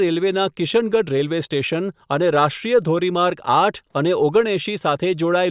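Nothing in this speech recording points to a technical fault at any point in the signal.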